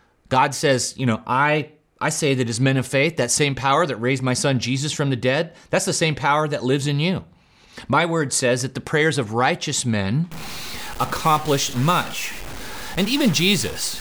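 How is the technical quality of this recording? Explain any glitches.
The recording has one clear fault near the end. From 10.32 s to the end, the speech takes on a harsh, buzzy distortion, and the pauses fill with noise. This sounds like a stuck bit, likely a single data line held fixed. That offsets about half the samples by a step of roughly -30 dBFS, and the offset switches with the waveform's sign near silence.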